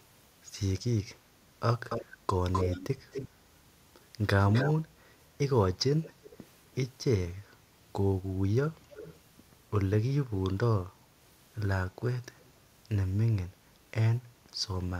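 Speech with short, delayed repeats of the talker trailing the original by about a quarter second (255 ms, later 294 ms), at 1.89, 2.52, 3.11, 4.39, 6.03, 8.79 and 12.39 s. They fade from fairly strong to barely audible. This is an echo leak, likely from a loudspeaker-side echo canceller passing residual pickup back.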